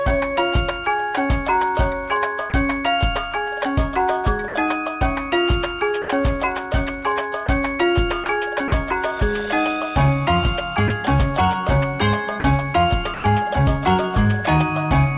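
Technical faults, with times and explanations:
2.50–2.52, 4.48–4.54, 6.02–6.08, 7.46–7.48, 10.88–10.90, 12.40–12.44 and 13.14–13.24 s, sound dropped by the voice detector: short gaps of 20 to 100 ms filled with steady comfort noise, likely the sender's detector mistaking quiet bits for background.
8.24–8.72 s, sound chopped by the voice detector: the detector likely switched on and off several times here, punching small holes totalling about 60 ms that were filled with comfort noise.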